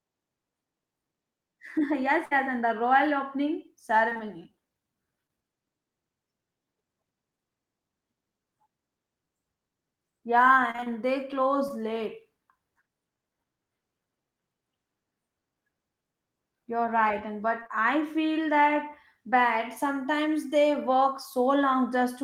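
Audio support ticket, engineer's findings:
Burst of packet loss, 2.25–2.33 s. Network path dropped or delivered late about 60 ms of consecutive packets; jitter buffer/decoder concealment extended the last speech for about 54 ms, fading it to a held buzz or hiss, then resumed with that stretch missing.

Repeated packet loss (robotic sound), three spans. Transport losing packets intermittently; decoder patching each hole by extrapolating prior audio. 4.09–4.21 s: 3 gaps, longest 21 ms, half the span synthesized. 10.71–11.72 s: 5 gaps, longest 30 ms, about 11% concealed. 17.60–17.71 s: 3 gaps, longest 20 ms, nearly half concealed. Result: choppy speech with fragments missing.

Short concealed packet loss, 5.27–5.31 s. About 20 ms missed the decoder deadline; concealment continued the preceding sound for 19 ms, then cross-faded back. Audible as a brief smear or wobble; a short consonant may drop.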